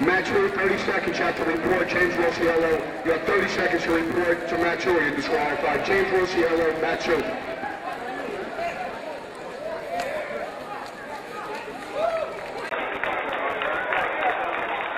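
From the start, a steady buzz sits under the audio at 86.1 Hz. It rises and falls with the signal's level. This is a filter restarted on every block. The filter drops its memory at each block boundary and begins again from silence. Each block therefore opens with a tiny transient. Those clicks repeat so fast they fuse into a buzz. The rate points to a 512-sample block.

At 12.69 s there is a brief gap of 20 ms. After it, the sound turns dull and boxy. The level shifts by about 5 dB, and a faint new background noise appears, well below the signal. This lasts to the end of the clip. The likely cause is an input switched to a poorer device, such as a headset's call mode with its narrower band.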